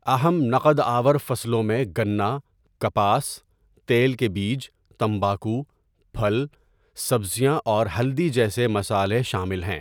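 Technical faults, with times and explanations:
1.70 to 9.06 s, clock drift buffer slips: a short click recurs at a steady 2.45 s interval through the speech, about four times in all. The likely cause is two devices running on separate clocks that disagree by roughly 70 parts per million, so the buffer between them gradually over- or underfills until a small block, on the order of seven samples, is dropped or repeated. Each abrupt jump in the waveform is heard as a tick.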